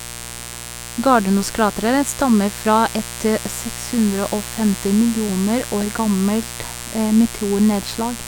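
There's a steady, raspy mains buzz under this speech the whole way through, spikes from 60 Hz power with harmonics climbing into the kilohertz range, sitting fairly loud, maybe 15 dB below the voice.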